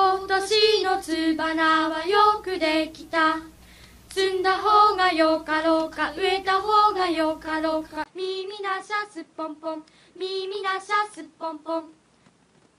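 At 8.04 s there's a brief 20 ms gap, then the sound turns duller and a bit quieter, with nothing above 10.5 kHz and a new noise floor sitting well below the signal. That's most likely an input switched to a poorer device, carrying on to the end.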